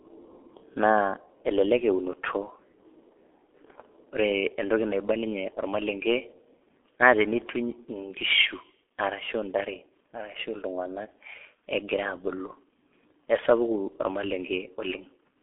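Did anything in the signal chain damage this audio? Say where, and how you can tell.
Yes. The codec stage is at fault: a G.723.1 codec, coding in coarse 30 ms frames, was applied throughout. Nothing above 3.5 kHz survives and the band sits near 300 Hz to 3.4 kHz, so the speech sounds muffled and hoarse with smeared consonants, which fits a stream of about 6 kbit/s.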